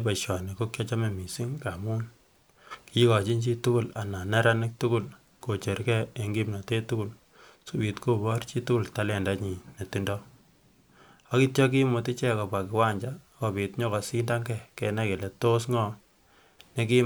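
Nothing stood out as a technical fault on listening to this speech recording.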